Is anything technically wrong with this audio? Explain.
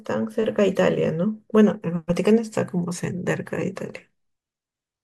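No, nothing technically wrong stood out on listening to this speech recording.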